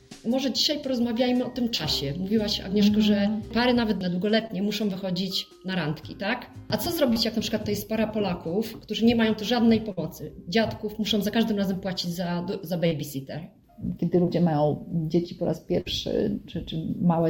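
At 1.75, 4.47 and 7.13 s there are instances of short concealed packet loss. Between 20 and 40 ms of audio failed to arrive in time, and the receiver covered each hole by extending the preceding sound before crossfading back. Each one is a brief smear or wobble. On a spectrogram it is a short stretch where the existing harmonics or noise texture simply repeat, with no new detail. The waveform shows a looped, slightly too-regular segment.

At 9.92 s a burst of packet loss removes about 60 ms. Roughly 50 ms of it is filled by continuing the last sound while lowering its level. This gives a held buzz or hiss that fades, and then the audio jumps ahead. Spectrally it is a flat, dimming band ending in an abrupt onset.

Short concealed losses return at 12.87 and 14.25 s, covering about 40 ms and 20 ms.

A final burst at 15.81 s repeats the roughly 50 ms fading fill and the jump past about 60 ms of audio.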